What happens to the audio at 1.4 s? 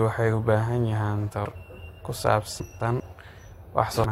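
At 1.44 s the speech runs into damaged data in the compressed stream: part of the encoded file is wrong, so the decoder cannot read the frame there correctly, loses its place and has to hunt for the next valid frame header before normal decoding resumes. What comes out is a very brief, artificial blip or chirp cutting across the speech, lasting only about 12 ms.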